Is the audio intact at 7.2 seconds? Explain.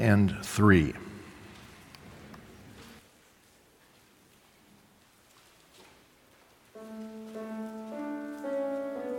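Yes, the audio is intact at 7.2 seconds, with no dropout, click, distortion or other fault at that moment.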